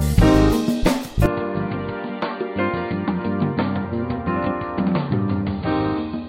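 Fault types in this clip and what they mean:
Input switched to a poorer device: At 1.26 s the sound abruptly turns duller and boxier, with no gap at the change. From there to the end, nothing above 4.6 kHz gets through. The level also falls, by roughly 10 dB. A faint new background noise appears, well below the sound itself. The likely cause is that the recording input changed mid-take to a narrower-band device, such as another microphone or a headset's call profile.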